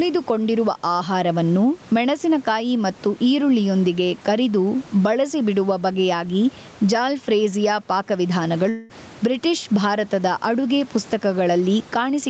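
All the way through, the background swells between phrases and ducks by around 10 dB under louder bits. That's gain pumping, likely from the input gain being set too hot with a fast limiter clamping down.

At 8.69 s a long network dropout hits: for about 0.2 s the last sound smears into a fading buzz, likely because packets never arrived, and the lost audio is simply gone when it resumes at 8.91 s.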